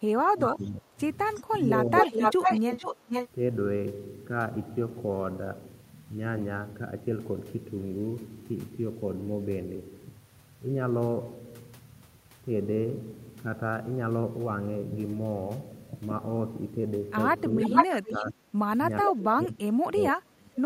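From 0.0 to 1.0 s the speech sinks sharply, by up to about 30 dB, and it dips again, less deeply (about 15 dB), between 1.4 and 2.63 s and between 17.55 and 18.64 s, then falls by about 30 dB from 19.03 s to the end. This is speech suppressed in double talk. With both sides talking at once, the echo canceller likely could not tell this talker from the loudspeaker echo and turned everything down.

Around these dips, delayed copies of the speech return. Faint scraps at 0.65–0.69 s and 1.35–1.41 s trail the original by 370 ms, at about 35 and 25 dB below it. A longer stretch from 1.99 to 3.29 s arrives 461 ms late at about the same level as the speech, and another from 17.59 to 18.31 s, also 461 ms late, is about 5 dB louder than the original. This is echo leak. The far end's canceller likely failed to remove what its microphone picked up from its loudspeaker and sent it back.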